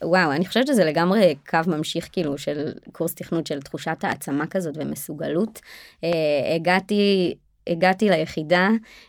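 Sharp single loud pops cut through the speech from 4.12 to 4.14 s and 6.13 to 6.15 s, each roughly 15 dB above it, likely from voltage spikes entering the signal path.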